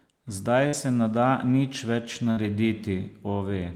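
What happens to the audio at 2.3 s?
A burst of packet loss hits from 2.31 to 2.39 s: about 57 ms is concealed by extending the last sound as a fading buzz or hiss, then speech resumes with roughly 60 ms skipped. The waveform shows a decaying tail, and the spectrogram shows smeared, repeated harmonics before a hard jump.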